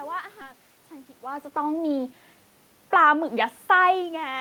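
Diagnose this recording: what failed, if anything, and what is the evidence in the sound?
Jitter buffer speed-up at the network receive stage: from 0.53 to 2.22 s speech runs at 109% with unchanged pitch, about 150 ms trimmed. The spectrogram shows shortened syllables, with no shift in frequency.

Automatic gain falling in call processing: from 2.80 to 3.14 s the gain eases down about 4 dB, and the waveform envelope and background shrink together.

Automatic gain rising in call processing: after the input drops about 17 dB, gain climbs about 4 dB from 3.04 to 3.46 s, and the waveform and noise floor swell together.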